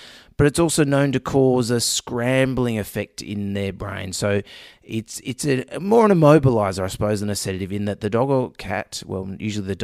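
No technical faults are audible anywhere in the recording.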